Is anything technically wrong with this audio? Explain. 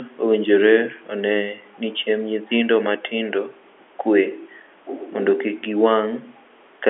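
No, nothing is technically wrong: this is speech carried over G.711 telephone coding, A-law by the sound of it, so the band stops at about 3.7 kHz as a phone line should, and only the faint level-tracking quantisation hiss of that format sits under it.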